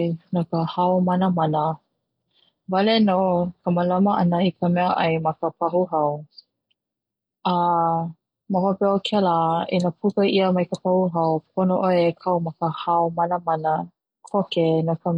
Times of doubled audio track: none

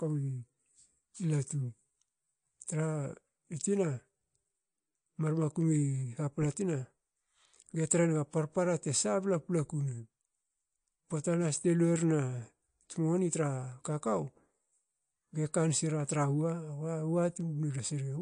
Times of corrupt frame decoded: none

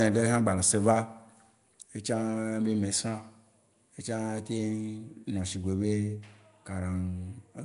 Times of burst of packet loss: none

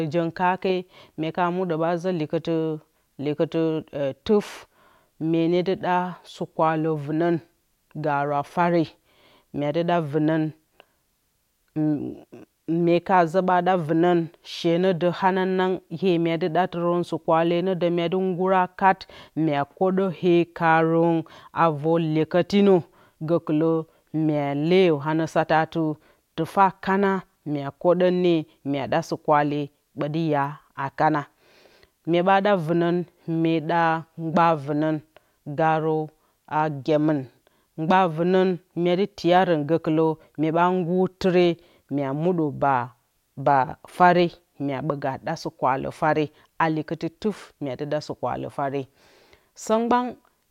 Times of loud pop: none

